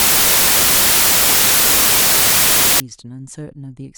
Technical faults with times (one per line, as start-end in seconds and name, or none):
0.00-2.80 samples built from the wrong bytes